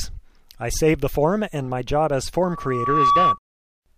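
Loudspeaker feedback squeal from 2.44 to 3.39 s: a 1.1 kHz tone swells in under a second to a few dB above the sound, because microphone-to-loudspeaker loop gain exceeds one. A steady interfering tone would not build up.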